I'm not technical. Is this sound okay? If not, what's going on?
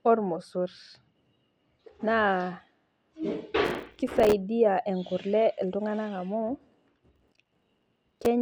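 No. Processor overload crackle at 3.65–4.33 s and 7.16–8.26 s: the computer fell behind, leaving dozens of tiny silent gaps, each a few milliseconds long, heard as gritty crackling.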